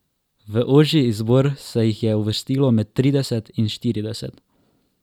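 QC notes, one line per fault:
0.66–3.18 s, sample clock jitter: timing wobble of a microsecond or two shifts each sample slightly, adding a grainy hiss about 45 dB below the speech. Unlike a steady noise floor, it swells on loud, bright, sibilant sounds and disappears in pauses.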